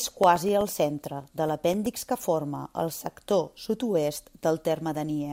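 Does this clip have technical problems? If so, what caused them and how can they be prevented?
Yes. Something on the system is periodically stalling the USB bus or audio driver, producing periodic USB or driver dropouts from 0.11 s to 1.86 s. Every 0.125 s, about a millisecond of speech is lost and replaced with silence, around fifteen gaps in all. Each gap sounds like a tick, so the speech carries an even ticking at eight per second. To prevent it, find and disable the background task or power-saving setting that interrupts the audio interface.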